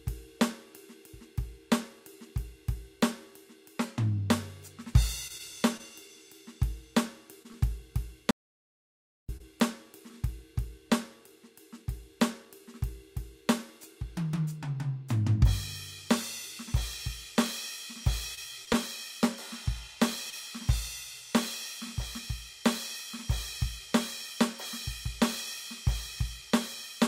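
From 5.27 to 9.42 s the music shows scattered short gaps: about seven lost packets, each patched by repeating the last sound. They are heard as brief ticks and smears, and show as tiny smeared or repeated slivers in the spectrogram. At 8.31 s an audio dropout to silence begins. For 0.98 s the music vanishes completely, with no room tone, likely because the input link failed. The waveform goes flat and the spectrogram is blank until 9.29 s. From 18.35 to 20.34 s about four more short concealed gaps, the longest around 20 ms, add hiccups and thin vertical seams.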